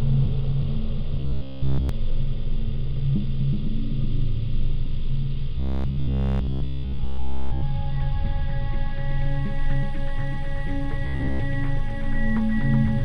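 Robotic sound from repeated short buffers at 1.20–1.89 s, 5.58–7.63 s and 11.07–11.40 s. A rigid, metallic buzz at 66.7 Hz comes in, likely from a 15 ms fragment looped while fresh audio was skipped: completely in the first two stretches, mostly in the last.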